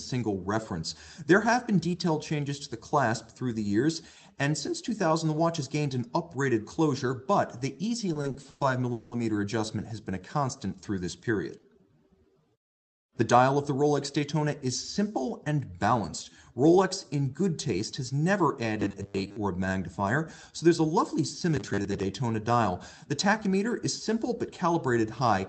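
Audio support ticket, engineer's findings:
Repeated stalls (stutter), 8.13 to 9.13 s. Six separate hitches, longest about 190 ms, roughly 380 ms of held-over sound in total, so about 38% of that second is concealment. Nothing audibly lost; timing drags. Component: jitter buffer underrun. Packets arrived late or slower than playout, buffer emptied repeatedly, receiver extended the last sound each time until fresh audio came in.

Jitter buffer slow-down, 10.32 to 10.68 s. Audio plays at about 89% speed with pitch unchanged, sounds drawn out, roughly 45 ms added. Component: jitter buffer time-stretching. Buffer running low or retargeting its delay; receiver repeated single pitch periods or pause fragments back to back to rebuild reserve.

Robotic sound from repeated short buffers, 18.81 to 19.38 s and 21.57 to 22.03 s. Rigid metallic buzz at a steady 100 Hz, covering most of the first span and about half of the second. 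Likely cause: one short block replayed while real audio is skipped. 100 Hz repeat fits a 10 ms buffer looped by starved playout.

Call path audible as codec coding noise and an 8 kHz top end, consistent with a low-bitrate call codec.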